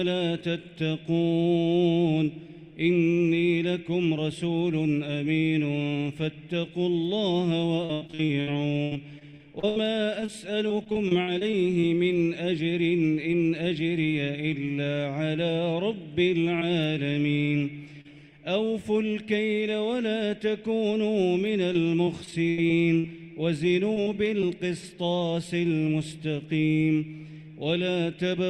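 From 7.85 to 11.85 s the sound turns choppy and robotic, breaking up over and over with pieces dropping out. This is repeated packet loss with the robotic sound it produces: about 25 separate holes, adding up to roughly 800 ms of lost audio and the longest about 82 ms. Each hole is patched by extending the preceding sound before the next loss arrives, so about a fifth of that stretch is synthetic fill rather than real signal.

At 16.59–16.63 s and again at 18.01–18.07 s there are brief smears, wobbles where the sound seems to hiccup. These are short concealed packet loss, about 20 ms and 40 ms respectively. In each, the receiver bridged a missing slice by continuing the last sound, following its pitch if it was tonal or using shaped noise otherwise, then crossfaded back into the real audio. A short transient caught in such a slice can disappear.

The robotic breakup returns from 21.73 to 23.06 s. 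It is repeated packet loss again, with about seven holes totalling around 200 ms, the longest about 79 ms, and roughly 16 percent of the span filled in.

Another short concealed packet loss follows at 23.94–23.98 s, a brief smear lasting about 20 ms. Immediately after, at 24.02–24.08 s, comes a burst of packet loss. It sounds as a brief held buzz or fading hiss with a small jump forward in the audio, because about 40 ms went missing in one run. The concealment stretched the last sound and let it decay before playback resumed further on, so the material in between is simply absent. A final short concealed packet loss at 24.40–24.44 s leaves one more smear, covering about 20 ms.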